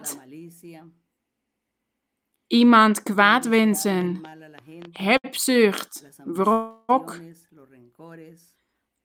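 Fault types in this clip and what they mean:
Train of clicks: Some outside source, likely interference from nearby equipment or a faulty connection or power supply, is injecting repeated pulses into the signal. From 4.01 to 5.01 s about seven clicks of much the same shape tick over the speech at an uneven pace, averaging roughly 6.3 per second. They reach roughly the level of the speech itself and are heard as popping on top of it.
Short stall from a late packet: A packet arrived after its playout time, so the jitter buffer briefly ran dry and the receiver stretched the last bit of sound until the packet turned up, then carried on from the same point. This happens at 4.29 s, held for 25 ms, and at 5.17 s, held for 67 ms. Nothing is lost, but each time a sound lingers a moment too long with a faint buzz or dip.
Call audio freeze: A longer hold-up of packets in transit, likely network congestion or delay, emptied the jitter buffer for a sustained stretch. 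From 6.53 to 6.91 s the receiver fills 361 ms by continuing the last sound as a fading buzz or hiss, never dropping to full silence. When the packets arrive, the speech resumes exactly where it stopped, so a pause has been inserted rather than anything cut out.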